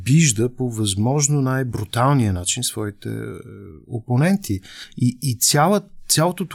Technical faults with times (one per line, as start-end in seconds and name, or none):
2.36 audio missing between chunks
4.84 audio missing between chunks